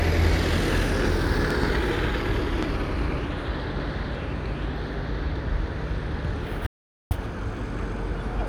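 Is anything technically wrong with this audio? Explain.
Yes. A loud pop, a double pop at 1.51 to 1.66 s and a single one at 2.63 to 2.65 s, is likely from a voltage spike from a plug, switch or static. Each sharp thump jumps roughly 15 dB above the surrounding sound, which continues underneath.

An audio dropout to silence runs from 6.67 to 7.11 s, likely because the input briefly disconnected while recording continued with silence. For 0.44 s the sound cuts to complete silence, with no background left.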